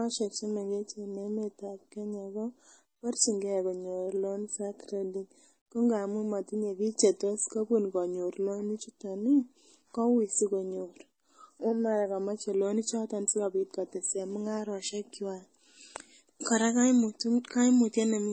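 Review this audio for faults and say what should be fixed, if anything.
Throughout the speech, nothing sits above 8.4 kHz and two kinds of swirly smearing overlap. This is likely transcoding between lossy codecs, fitting low-rate MP3 re-encoded to AAC. On a spectrogram it shows as a hard ceiling with blotchy holes below. Encode once from the original uncompressed source rather than converting one compressed file into another.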